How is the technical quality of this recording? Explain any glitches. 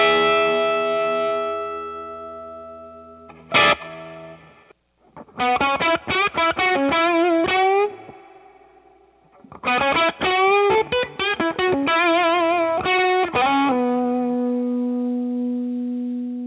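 No glitches to report here: the audio comes through as you'd expect from a phone-style call path, with the narrow telephone-band sound of G.711 mu-law and nothing audible above about 4 kHz.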